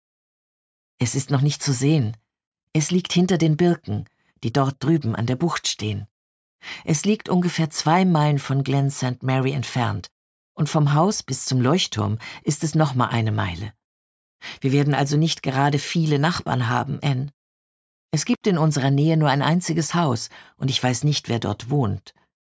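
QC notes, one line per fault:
No fault to note.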